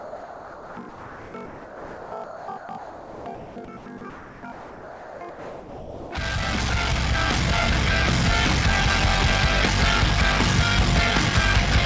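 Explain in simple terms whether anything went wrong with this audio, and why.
Block size mismatch (padded) runs through the whole clip. One stage hands over shorter chunks of audio than the next stage expects, and the leftover space in each chunk is filled with silence. That puts a tiny gap in every chunk, heard as a steady buzz at about 47 Hz, which fits a 1024-sample read block. The padding also stretches everything, so the audio plays at about 0.86 times its normal speed while keeping roughly its normal pitch.

Sound chopped by the voice detector affects the stretch from 0.0 to 6.11 s. In that part, about 4.9 seconds of the real sound is replaced by artificial comfort noise, so the sound comes and goes in choppy pieces. The likely cause is the sender's voice detector repeatedly deciding there was nothing worth sending, switching transmission off and on, and letting the receiving end fill the gaps with generated noise.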